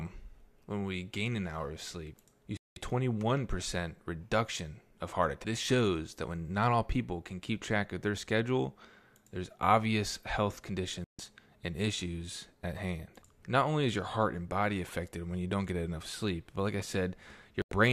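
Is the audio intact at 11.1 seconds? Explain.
No. A digital broadcast dropout mutes the speech from 11.04 to 11.19 s, a hole of about 144 ms consistent with roughly six failed frames. The receiver silenced output until valid frames resumed, so the gap is clean silence, with no hiss or smeared repair filling it.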